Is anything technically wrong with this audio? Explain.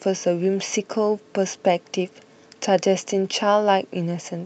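No, nothing stood out on listening to this speech recording, which carries the ordinary bandwidth of a call microphone path with no content above 8 kHz.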